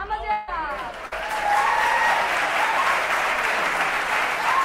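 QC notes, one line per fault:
0.31–0.49 s, long network dropout: about 160 ms of audio is missing. The last sound is extended as a fading buzz or hiss across the gap, likely from lost network packets.
1.05–1.13 s, burst of packet loss: about 60 ms never arrived. The preceding sound is held and turned down over the gap, then the audio resumes further on.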